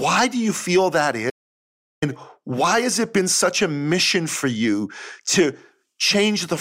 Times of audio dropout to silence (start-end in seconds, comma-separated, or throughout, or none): 1.30-2.02